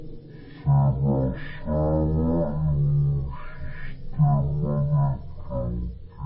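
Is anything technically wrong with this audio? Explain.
Yes. Wrong sample rate throughout: samples play at a third of their intended rate without conversion, which fits 48 kHz audio played at 16 kHz. The speech drags at one-third speed, pitched about 19 semitones low.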